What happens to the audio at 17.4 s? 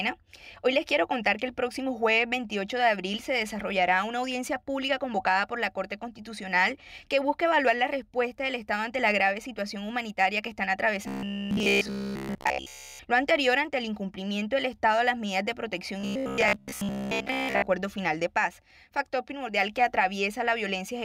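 At 17.4 s the sound has turned into a rigid, metallic buzz locked at about 67 Hz. The buzz still roughly tracks the shape of the underlying audio. This is robotic sound from repeated short buffers, running from 16.01 to 17.67 s. The likely cause is new audio arriving too seldom, so playback keeps looping a fragment of roughly 15 ms and skips most of the real signal. That fixed repeat rate sets the buzz pitch.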